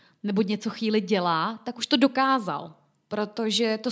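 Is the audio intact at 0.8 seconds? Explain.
Yes, the speech at 0.8 seconds is intact, with nothing there beyond the ordinary band-limiting of call microphone processing, which leaves no content above 8 kHz.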